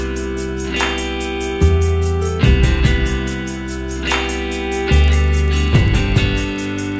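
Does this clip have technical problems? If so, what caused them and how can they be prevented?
Yes. From 3.48 s to the end, the audio carries a steady 25 Hz buzz, present only while there is signal. This is a resampler restarted on every block. Each block was converted in isolation, so the filter at each block edge worked from missing or wrong neighbouring samples and left a small error there. Repeating every 40 ms, those errors merge into a buzz at the block rate. The band-limited sound fits a 44.1 kHz to 16 kHz conversion. To prevent it, keep the resampler's filter state and history running continuously across block boundaries rather than reinitialising it for each block.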